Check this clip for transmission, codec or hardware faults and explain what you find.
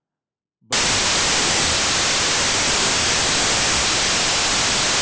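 One fault is present: a wrong sample width from 0.73 s to the end at 5.01 s. Each stored sample appears to have been read as two, which fits 32-bit data read as 16-bit. The speech plays at half speed and an octave low, and the garbled low-order halves bury it under loud, harsh noise.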